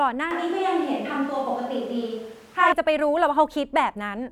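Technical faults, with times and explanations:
0.31–2.72 s, switch to a distant microphone: the speech abruptly turns roomy, hollow and thinner at a similar level, with background noise about 30 dB down, likely from a farther microphone replacing the close one.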